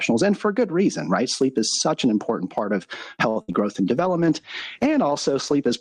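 Throughout the speech, the gain swings by around 20 dB, so the level sounds squashed and breathing. That gain pumping is likely a preamp set far too hot with a fast limiter clamping every peak. Right after "an important part of", at 3.29 to 3.38 s, the sound freezes and hangs for about 63 ms before carrying on from the same point. This short stall from a late packet happened because the jitter buffer ran dry and the receiver held the last sound until the packet arrived. Nothing is lost. Moments later, from 3.42 to 3.50 s, a held, fading fill bridges a gap, and the speech resumes about 80 ms further on. That burst of packet loss was concealed by extending the last sound and letting it decay, and the skipped audio never returns. At 3.52 to 3.56 s a brief smear marks a short concealed packet loss of about 20 ms, patched by continuing the preceding sound and blending back in. From 3.97 s to the end the audio turns rough and muffled: a call bitrate drop from 40 to 15 kbps forced the codec to quantise coarsely and trim the high frequencies.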